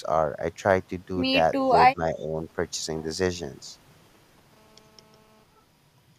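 From 1.92 to 2.0 s the speech sinks into a sharp, deep gap, then dips slightly again from 2.17 to 2.33 s. This is speech suppressed in double talk, likely from an echo canceller ducking during overlap, and it shows as waveform notches and faded spectrogram bands. From 2.19 to 2.24 s a very faint echo leak returns the voice about 337 ms late, a barely visible ghost trace beneath the main energy.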